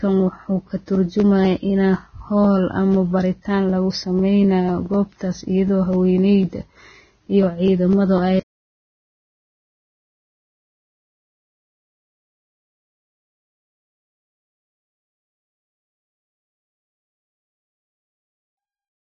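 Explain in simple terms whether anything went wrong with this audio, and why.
Yes, the speech is heavily damaged all the way through, most likely by Vorbis compression squeezed too hard. Nothing above about 6.5 kHz remains, and the treble that survives sounds hissy and grainy. Simple muffling would only dull the sound without adding that grit. The gentle fade-out near 17 s is deliberate.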